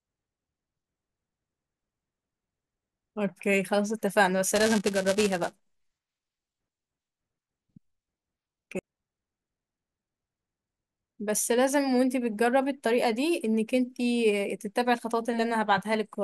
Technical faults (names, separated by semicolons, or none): buffer tearing